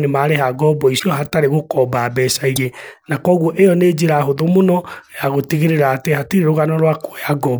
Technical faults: broken MP3 bit reservoir

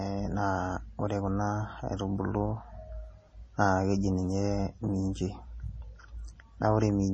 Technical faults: MP3 compression

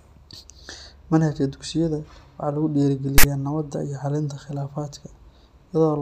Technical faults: file tags played as audio

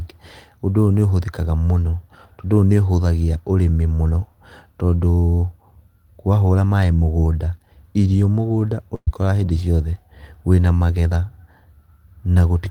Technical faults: burst of packet loss

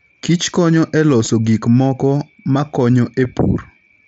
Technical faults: concealed Bluetooth headset packet loss

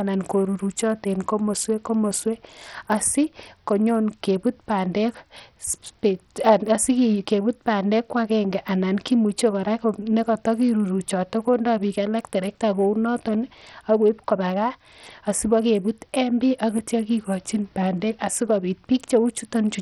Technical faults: Bluetooth SBC compression

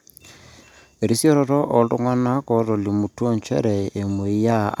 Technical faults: none

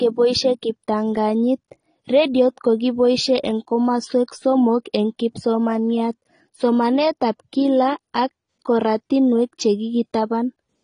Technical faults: AAC compression

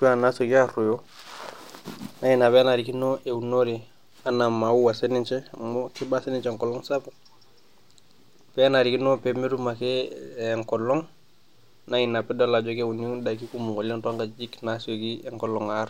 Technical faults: none

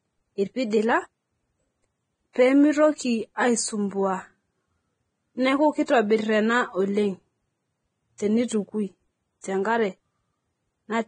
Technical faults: Vorbis compression; pre-echo

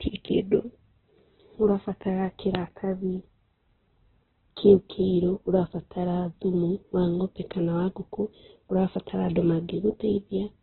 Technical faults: Opus compression

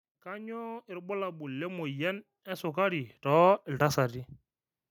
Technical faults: automatic gain rising

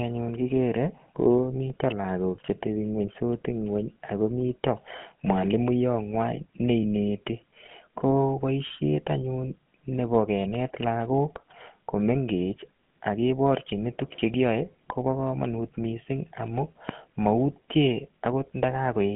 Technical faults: GSM full-rate codec

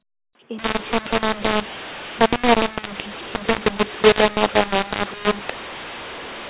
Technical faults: mu-law and A-law mixed up

